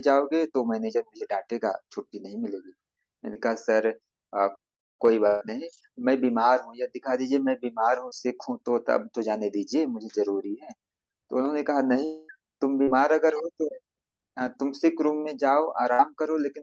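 At 3.33 to 3.37 s a short concealed packet loss occurs: about 20 ms of the call reached the decoder too late, so the receiver filled the gap by extending the last sound and then blended back into the real signal. It is heard as a quick smear or wobble in the speech. The same happens at 8.09 to 8.13 s (about 20 ms) and at 12.83 to 12.89 s (about 40 ms).

From 5.27 to 5.43 s there is a burst of packet loss, with about 140 ms of audio missing in a row. The receiver held the last sound and let it decay across the gap, so the speech turns into a brief sustained buzz or fading hiss. It then jumps ahead, and what fell in that stretch is gone. A shorter burst of about 60 ms at 15.93 to 16.01 s does the same thing on a smaller scale.

Between 12.05 and 12.31 s, roughly a quarter second of audio never arrived, most likely a long network dropout. Concealment filled the whole gap with a continuation of the preceding sound that fades as it goes, and no silence opens up before the speech returns further along with that segment missing. 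Throughout, the Opus call path at 32 kbps limits the audio to 8 kHz bandwidth.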